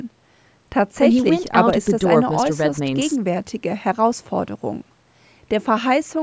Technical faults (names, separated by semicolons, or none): none